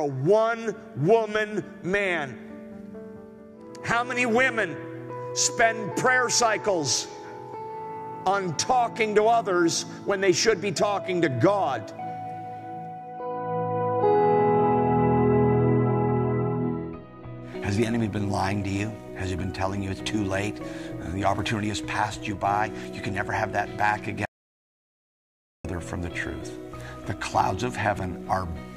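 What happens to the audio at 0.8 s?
Nothing goes wrong at 0.8 s; the audio plays through that moment intact, with no dropout, click or other fault.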